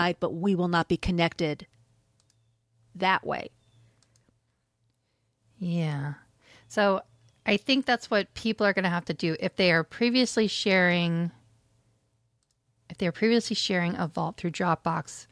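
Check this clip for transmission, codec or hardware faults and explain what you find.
Nothing in the speech points to a transmission, codec or hardware problem, so there is nothing to report.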